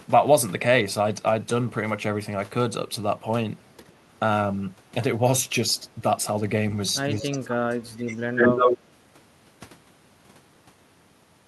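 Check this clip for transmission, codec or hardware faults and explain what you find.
Two kinds of fault can be heard, both tied to echo cancellation on a hands-free call.

Speech suppressed in double talk: at 3.82 to 3.91 s the speech dips slightly. From 7.2 to 8.19 s it falls deeply, nearly cutting out. The likely cause is the echo canceller turning down the talker while the other side was also speaking.

Echo leak: from 8.36 to 8.79 s a copy of the speech returns 142 ms late, slightly louder than the original. This is likely loudspeaker sound the canceller failed to remove.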